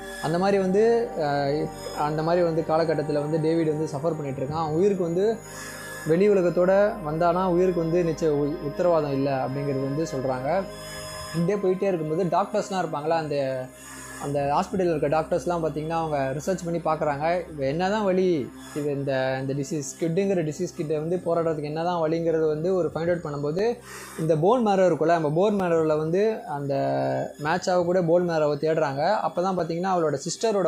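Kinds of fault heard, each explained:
Periodic USB or driver dropouts: something on the system stalls the USB bus or audio driver every 2.0 s, and each stall drops a few milliseconds of audio, filled with silence. From 23.59 to 29.60 s this leaves about four evenly spaced ticks, heard only where there is signal.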